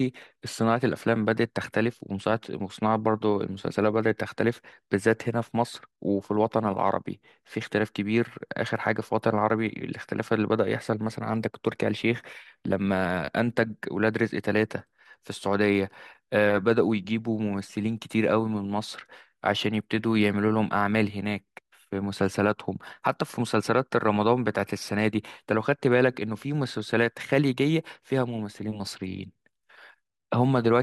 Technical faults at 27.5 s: none

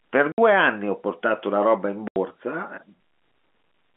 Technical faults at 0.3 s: packet loss filled with silence

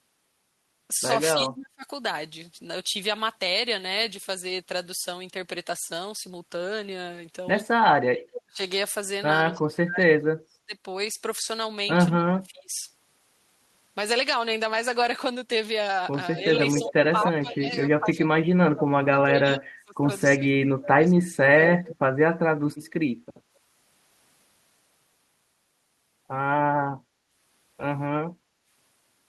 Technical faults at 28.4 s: background gated by the echo canceller

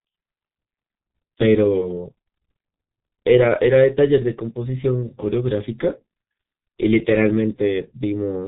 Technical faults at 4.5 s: G.723.1 codec

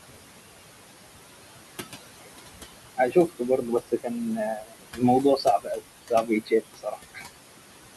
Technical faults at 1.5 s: noise suppressor artifacts

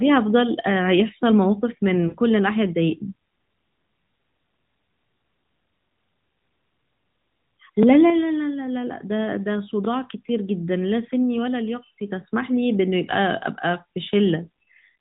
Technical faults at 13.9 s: overlapping chunks

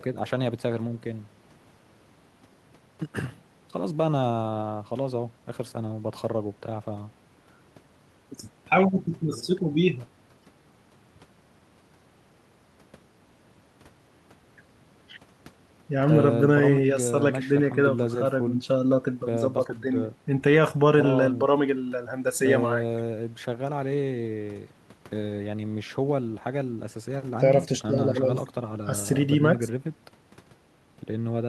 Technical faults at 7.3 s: none

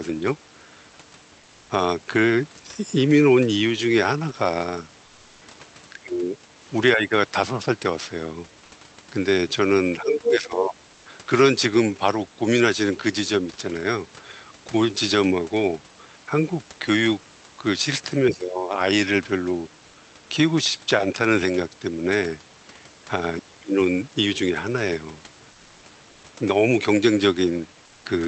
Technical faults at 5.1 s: comfort noise in place of the background

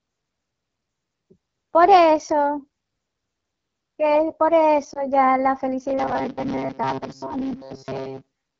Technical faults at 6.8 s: AMR wideband (HD Voice) codec; robotic sound from repeated short buffers

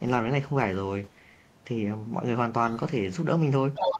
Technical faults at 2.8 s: other side's voice leaking through

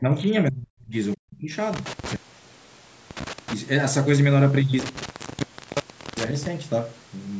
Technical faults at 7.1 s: none

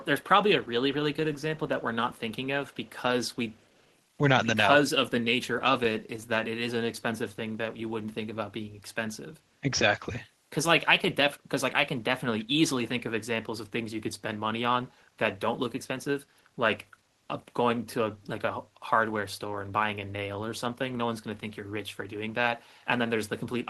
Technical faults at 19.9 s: none

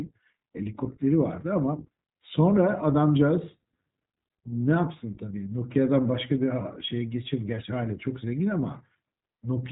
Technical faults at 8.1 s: iLBC codec

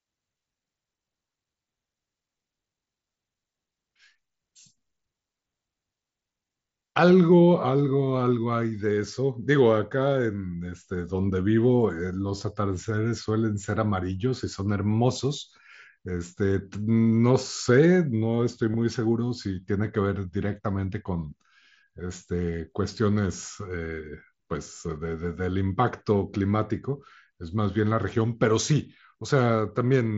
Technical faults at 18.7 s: concealed Bluetooth headset packet loss

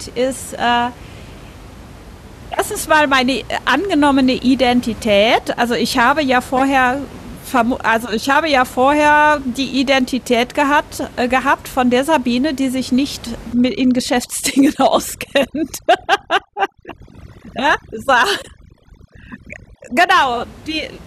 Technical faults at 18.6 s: overdone noise removal

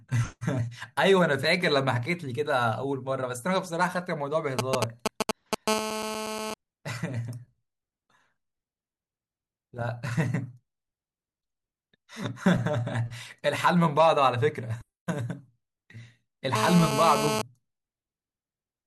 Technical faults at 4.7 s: GSM signalling bursts

